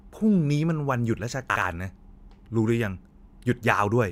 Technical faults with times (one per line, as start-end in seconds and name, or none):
1.50-1.62 chunks out of order